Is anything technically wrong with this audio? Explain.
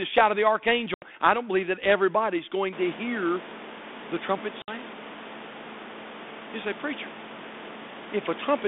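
Yes. Packet loss on an ADPCM call occurs twice: an 80 ms gap at 0.94 to 1.05 s and a 60 ms gap at 4.62 to 4.71 s, each a few packets' worth. The missing stretches are filled with hard-edged silence. Because ADPCM decodes each sample relative to its adaptive predictor and step size, the receiver's state no longer matches the sender's after each hole. The sound resumes slightly distorted, then settles within some tens of milliseconds. The room noise that rises around 2.5 s and the telephone band of about 200 Hz to 3.6 kHz, which fits 32 kbit/s G.726, are audible underneath.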